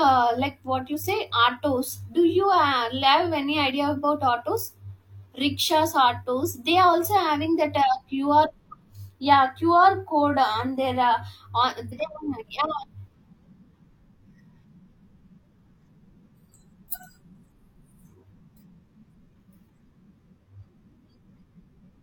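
At 11.88 to 11.93 s the speech jumps forward as compressed frames are skipped. Whole frames of the encoded stream never reach the output, either because they are missing or because the decoder rejected them as corrupt, so playback resumes later in the sound. The gap is about 150 ms, which fits roughly four frames of 42.7 ms each.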